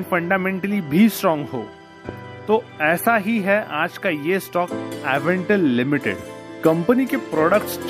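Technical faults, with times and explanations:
2.09–2.11 s, loud pop: a single sharp spike a few dB above the sound, likely a voltage pulse from a switch or static, showing as a thin full-band vertical line.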